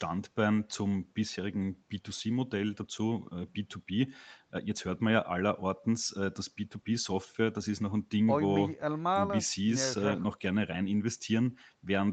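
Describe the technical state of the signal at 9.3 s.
At 9.3 s the speech is intact, carried cleanly through the call's microphone processing and Opus codec path with its band-limit at about 8 kHz.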